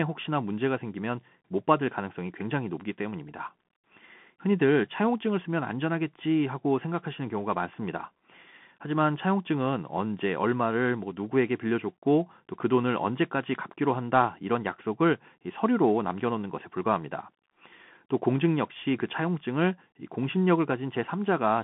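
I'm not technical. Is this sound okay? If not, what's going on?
No. Throughout, the speech goes through a Bluetooth CVSD headset codec: muffled, with nothing above 3.8 kHz, scratchy s sounds and a grainy hiss, unlike a clean phone line's smoother narrowness.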